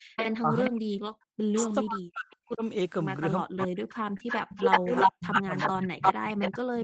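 From 0.0 to 0.14 s the room background drops away almost to nothing, falling by about 38 dB over roughly 150 ms before it returns. This is background gated by the echo canceller: while the loudspeaker was active, the canceller clamped the microphone down hard, taking the ambient sound with it.

From 0.16 to 2.36 s a delayed copy of the speech trails the talker by 414 ms, sitting only about 5 dB below the direct voice. This is an echo leak, likely from a loudspeaker-side echo canceller failing to remove what its microphone picked up and sending it back.

From 0.42 s to the end, the talker's voice repeatedly sinks and breaks up, in places falling by around 40 dB, so syllables thin out or vanish in pieces. This is speech suppressed in double talk, likely because both ends were talking together and the canceller, unable to tell its own talker from the loudspeaker echo, turned everything down.

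The echo returns from 3.58 s to the end with a 355 ms lag, now roughly 5 dB louder than the speech itself, so the returned copy dominates. This is a second echo leak, likely from the same kind of residual echo getting past the canceller.

At 4.17 to 4.21 s there is a brief smear where about 20 ms of audio is missing and 19 ms was filled in. This is short concealed packet loss: the decoder extended the preceding sound to cover the hole, then blended back into the real signal.

Within that same span, 4.19 to 4.21 s, and again at 4.51 to 4.53 s, the sound turns briefly rougher and noisier for 20 ms. These are lost packets rebuilt from error correction: the decoder played the low-bitrate Opus backup copies carried in the following packets. In this 8 kHz-wide call there is no top band to lose, so the effect is added roughness rather than a treble dip.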